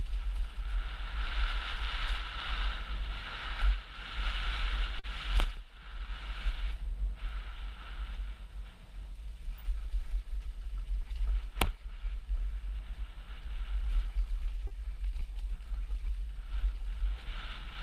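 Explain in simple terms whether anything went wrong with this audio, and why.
Two brief dropouts show up here, both short concealed packet loss: one from 4.99 to 5.05 s, the other from 14.67 to 14.72 s. Each time, about 40 ms of the stream arrived too late to be played, so the receiver patched the gap by stretching the sound just before it and then blending back into the real audio. What you hear is a quick smear or wobble, and anything very short in that gap can simply disappear.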